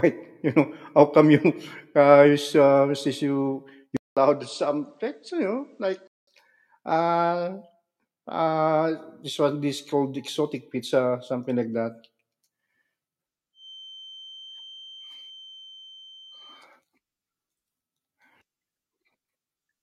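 Right after "uh since you", at 3.97 s, the speech drops out for about 200 ms and comes back duller, a bit quieter, with nothing above 9.4 kHz and faint new background noise underneath. That's most likely the input switched to a poorer device, and it holds until 6.27 s.

From 13.52 s to 16.67 s there's a thin 3.1 kHz feedback whistle sitting well under the speech. The speaker-to-mic loop is likely hovering just at the edge of feedback, so that one tone keeps ringing, swelling and fading slowly, without building up.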